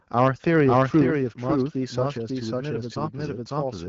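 Throughout the clip the sound is a doubled audio track. A second, full-band copy trails the first by about half a second at roughly equal loudness, likely from a second capture path or an out-of-step edit. On a spectrogram every pattern repeats, shifted right, with no reverberant smear between copies.

Microphone overload hits from 0.18 to 0.28 s and again from 0.55 to 1.03 s, with peaks pushing about 2 dB and then about 5 dB past the converter's limit. The input gain was likely set too high. Waveform peaks are flattened, giving a harsh, crackling edge and broadband splatter on the spectrogram.

At 1.02 s the microphone volume is stepped down by 5 dB, likely the call software reacting to that clipping. Everything, background included, drops abruptly. The waveform envelope narrows suddenly, and the spectrogram darkens evenly across the band, which stops near 7.5 kHz because of the wideband codec.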